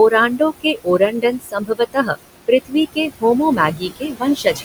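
A speech recording with noise suppressor artifacts throughout: the suppressor pulls the room noise, which sits about 11 dB under the speech, down by about 20 dB in the gaps, so the background dips between phrases and swells back beneath them. On a spectrogram the noise floor appears as blotchy, flickering patches rather than an even haze. Speech cut by the noise suppressor happens three times, at 0.38 to 2.16 s, 2.93 to 3.23 s, and 3.75 s to the end, where quiet speech energy was mistaken for noise and turned down by as much as about 18 to 20 dB. Roughly 0.7 s of the first stretch, about a tenth of a second of the second, and about half a second of the last sound swallowed or faint. The waveform shows the envelope dropping there, and the spectrogram shows speech energy turned down along with the background.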